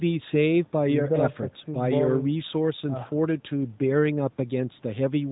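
No technical faults can be heard anywhere in this recording.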